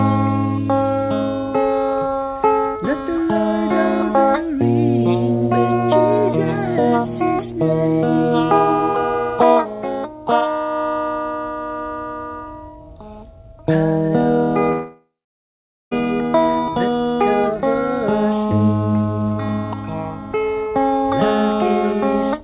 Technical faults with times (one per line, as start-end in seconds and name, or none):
14.72-15.93 long network dropout